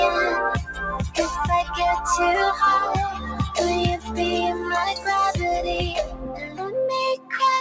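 Throughout, the noise suppressor applied to music or sounds pumps the level by around 10 dB. Held sound and tails thin and flutter, and the waveform envelope breathes unevenly. Sound cut by the noise suppressor sinks at 0.67–0.82 s (about 8 dB), 3.12–3.57 s (about 7 dB), 3.97–4.19 s and 6.08–6.75 s (about 12 dB each), and 7.17–7.32 s (about 13 dB). These show as faded spectrogram patches, under a band that stops at 8 kHz, and as shrunken waveform stretches.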